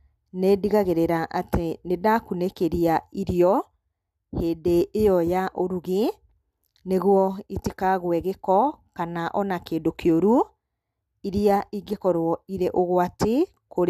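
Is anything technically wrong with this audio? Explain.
No, nothing technically wrong stood out on listening to this speech recording.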